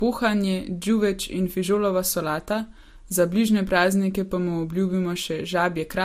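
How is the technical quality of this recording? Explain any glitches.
The quality is held back for the whole recording: the speech carries a smeary, swirly coding texture, and nothing reaches above 15.2 kHz. That's likely transcoding between lossy codecs, consistent with an MP3 pass near 61 kbit/s re-encoded to Vorbis at a similar rate. The second encoder spends bits re-coding the first one's artefacts and adds its own, so both kinds of grit pile up, and the lowest cut-off in the chain, 15.2 kHz, stays in place.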